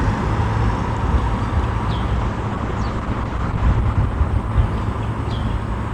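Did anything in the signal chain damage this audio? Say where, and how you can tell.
Yes. A call bitrate drop at the codec stage from 2.16 s to the end turns the audio rough and muffled, which fits Opus falling from 128 kbps to 11 kbps.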